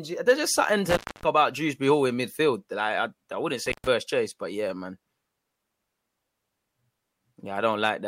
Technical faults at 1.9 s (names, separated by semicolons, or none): none